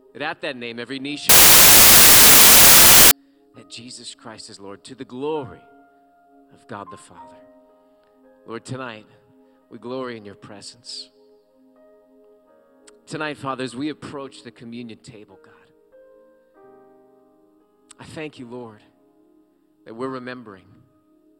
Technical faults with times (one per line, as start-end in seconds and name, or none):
1.29-3.11 samples built from the wrong bytes